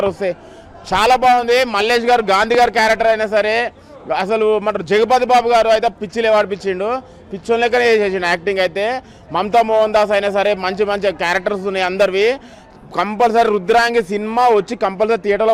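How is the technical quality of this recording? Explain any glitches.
The recording has one technical glitch, a single loud pop.

Loud pop, 2.55 to 2.57 s: a sharp, brief click rising roughly 10 dB above the surrounding level. It is likely a voltage spike from a plug, switch, static discharge or driver hiccup, added to the signal while the sound continues underneath.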